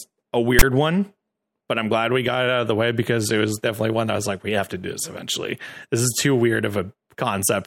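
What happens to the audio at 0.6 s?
From 0.59 to 0.63 s the speech is broken by file tags played as audio. A block of text metadata is read as if it were samples. This gives a loud rasp offset to one side, with hard edges. The zero padding that follows drops to dead silence.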